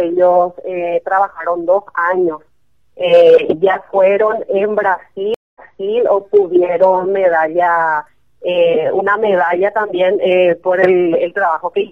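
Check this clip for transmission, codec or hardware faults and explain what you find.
One fault, a stream reconnect from 5.34 to 5.97 s: the audio drops out for 0.21 s, then resumes 0.42 s earlier, repeating material, because the player reconnected and the server resent buffered audio.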